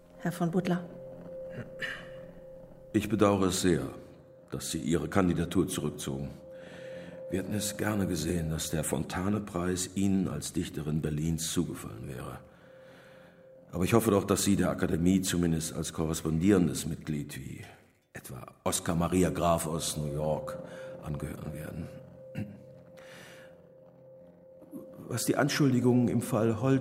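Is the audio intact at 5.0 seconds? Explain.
Yes, at 5.0 seconds the audio plays through cleanly, with no dropout, click, distortion or other fault to be heard at that moment.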